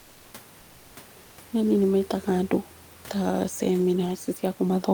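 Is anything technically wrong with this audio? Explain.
Yes. From 0.61 to 0.91 s, about 300 ms, there is comfort noise in place of the background. The likely cause is discontinuous transmission, as in Opus DTX: the sender pauses, and the receiver synthesises a steady, featureless noise about 2 dB quieter than the real room noise, which sits about 28 dB below the speech.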